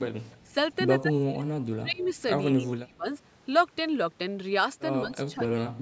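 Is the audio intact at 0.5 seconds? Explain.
No. An echo leak runs from 0.28 to 0.50 s, ending right at that moment: a faint, delayed copy of the speech trails the original by about 190 ms, sitting roughly 30 dB below it as a ghostly repeat. The likely cause is a far end playing the call over a loudspeaker, where the echo canceller failed to fully strip its microphone's pickup of that playback, so a residue was sent back into the call.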